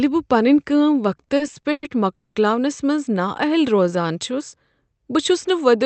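Just after "پنٕنہِ کٲم", from 1.17 to 1.85 s, the speech drags and catches six times, the longest catch 110 ms. These repeated stalls (stutter) come from packets arriving late: the jitter buffer kept running dry, and the receiver stretched the last sound each time, about 240 ms in all.

From 2.15 to 2.38 s, just before "منز نااہل", the sound hangs as a fading continuation for 210 ms and then resumes where it stopped. This call audio freeze likely comes from packets being held up in transit, with the delay growing by 210 ms.

After "منز نااہل", from 3.76 to 4.13 s, the speech slows to about 84% speed at unchanged pitch, drawn out by 69 ms. In this jitter buffer slow-down, repeated pitch periods rebuilt the buffer's reserve.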